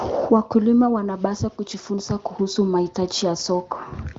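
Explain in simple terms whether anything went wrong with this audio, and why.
Nothing went wrong that I could hear; listening to the recording, nothing stood out as a problem.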